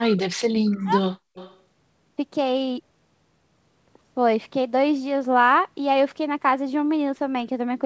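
From the start to 1.02 s the speech sinks by as much as about 40 dB and breaks up, likely speech suppressed in double talk as the canceller ducks the near talker; unlike packet loss, it dips rather than dropping out cleanly. At 0.80 to 0.84 s, and again at 1.34 to 1.60 s, a faint copy of the speech trails it by 187 ms. This is likely echo leak from a loudspeaker that the canceller failed to remove. The first burst sits far below the speech, and the second is louder, roughly 20 dB down. Its fixed lag marks it as echo rather than room reverberation.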